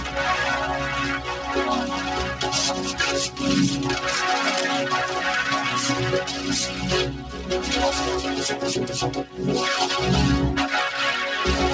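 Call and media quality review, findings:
Cable scratch noise, 4.57–4.74 s: dense, uneven scratchy burst nearly as loud as the signal. Likely a worn cable or connector shifting, contact resistance fluctuating. Call band tops out at 8 kHz, consistent with G.722.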